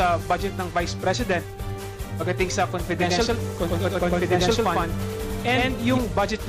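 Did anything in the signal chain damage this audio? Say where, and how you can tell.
Yes. From 3.00 to 5.98 s, a dry, equally loud copy trails about a tenth of a second behind. This is a doubled audio track, likely from a slower second capture path.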